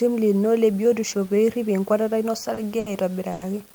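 Speech clip in which the samples were likely truncated to a very coarse bit depth without dither, consistent with about 7 bits; this leaves a grainy, signal-following distortion roughly 30 dB below the speech, harshest on quiet passages. Short stalls from a late packet occur at 2.54 to 2.59 s, just after "pee irip enkuatata ino", then at 2.79 to 2.88 s and 3.32 to 3.43 s. Each time the jitter buffer ran dry, so the last sound is held for about 30, 70 and 90 ms respectively before the speech resumes with nothing lost.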